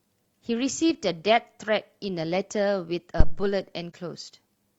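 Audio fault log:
3.20–3.48 s: phantom power thump. A supply switched on or off on the live input drives a step through the coupling capacitors, giving a deep thump that decays within about 61 ms.
3.90–3.95 s: AAC frame loss with muting. About 43 ms of audio dips briefly, which fits a single lost frame, and it fades out and back in with soft edges.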